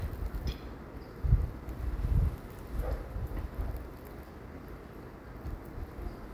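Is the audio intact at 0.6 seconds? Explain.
Yes, the audio is intact at 0.6 seconds, with no fault at that moment.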